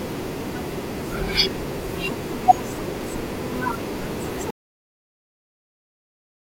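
At 4.51 s the speech cuts off mid-flow into an audio dropout to silence that lasts 2.04 s to the end. The input was likely lost while recording continued as silence. Unlike a fade or noise gate, the cut is abrupt, with no room tone or decaying tail.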